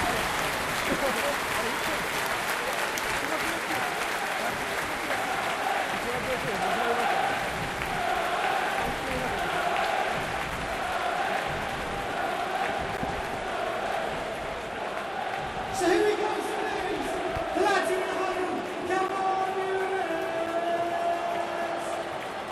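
Blocks of digital silence occur at 12.97 s, 19.08 s and 20.46 s. For about 10.7 ms, 10.7 ms and 6.3 ms respectively, the sound is replaced by zeros. The first two lengths fit a 512-sample buffer, pointing either to output that was not filled in time or to a calculation that produced invalid values. Each dropout cuts in and out abruptly with no fade, and because all three are shorter than about 15 ms, they are heard as brief ticks or dips rather than as gaps of silence.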